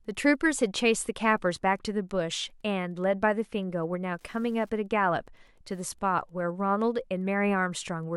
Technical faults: Wi-Fi interference

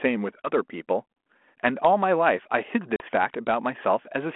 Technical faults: packet loss on an ADPCM call

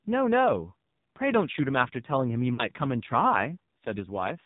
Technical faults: AMR narrowband mobile codec; lost AMR speech frames

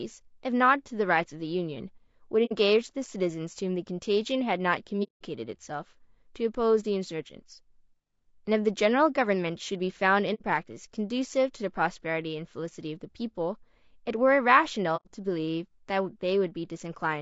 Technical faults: low-delay AAC compression; AAC frame loss with muting

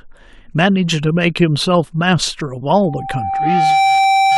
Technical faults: loudspeaker feedback squeal

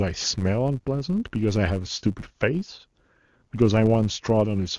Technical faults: filter restarted on every block

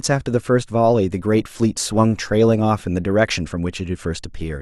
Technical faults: adaptive stream at a lower bitrate

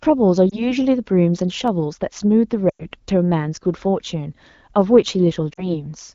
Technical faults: lost AMR speech frames; dropped samples

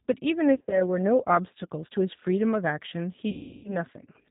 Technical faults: G.729 codec; VoIP packet loss concealed by the speech codec

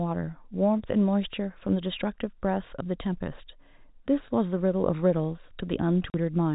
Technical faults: packet loss filled with silence

